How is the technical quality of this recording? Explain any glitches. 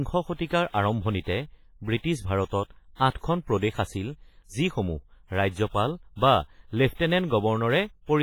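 The recording is compromised by heavy WMA compression, audible from start to finish. The speech sounds ringing and washy. A hiss rises and falls with the speech. The likely cause is a transform codec run with long blocks and a simple encoder. Each block's quantisation noise smears across tens of milliseconds, so it trails and leads the syllables. Weak spectral detail is thrown away entirely. The depth of damage fits a low bitrate of around 24 kbps.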